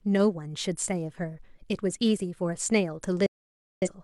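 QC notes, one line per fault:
3.26–3.88 s, digital broadcast dropout: the speech cuts out abruptly, with a fade of only about 3 ms, and the receiver mutes while it waits for clean frames. That makes a hole of roughly 0.55 s. Whatever was said there is simply gone, not smeared or garbled.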